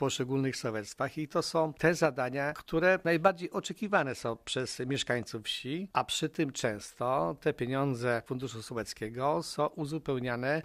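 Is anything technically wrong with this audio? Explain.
Yes, there's a Bluetooth SBC bit pool drop from 3.62 to 5.23 s. The link seems to have congested, and the encoder cut its bit budget, which sounds like a fall from around 31 to 15, about 105 kbps. The top sub-bands starve, so the treble goes dull and gritty until it recovers.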